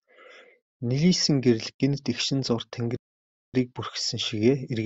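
At 2.97 s, just after "гэрэл гэнэт эгшин зуур", the speech cuts to silence for about 0.57 s and then resumes. This is a playback stall, likely the player starving for data. Unlike a dropout, it is a sustained halt in mid-flow, not a brief gap.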